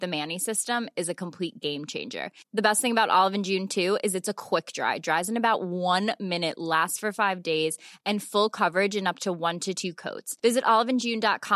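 Nothing goes wrong anywhere in this recording of speech, so there isn't a single fault to walk through in time order.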